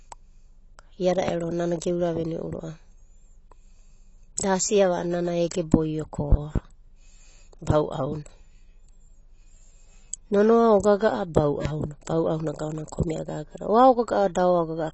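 From start to finish the speech sounds dull and smeared, with a watery, warbling texture on sustained sounds and a fizzy edge on sibilants. Nothing is heard above 8 kHz. This is most likely AAC compression, in the AAC-LC form, squeezed hard enough to be plainly audible, which points to a low bitrate of around 24 kbps. The encoder discards high frequencies and coarsely quantises what remains, leaving gaps and substitute noise in the spectrum.

Sharp, loud pops sit on top of the speech, which continues beneath them. The first is at 1.28 to 1.32 s. A quick double pop follows between 6.32 and 6.59 s, and a single pop occurs at 11.65 to 11.69 s. Each peaks roughly 15 dB above the surrounding signal. These loud pops are likely sudden voltage steps or spikes entering the chain, such as a switching transient, static discharge or driver glitch. The circuits that follow turn each one into a short thump.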